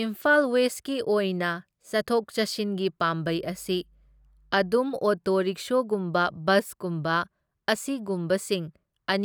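A ground loop or nearby transformer lets the 50 Hz power line leak into the signal path between 3.23 and 4.76 s, producing mains hum. For that stretch a steady, low buzzing tone sits beneath the speech, about 35 dB below it, as a constant drone with a few low harmonics above the fundamental. It is present from 3.23 s to 4.76 s.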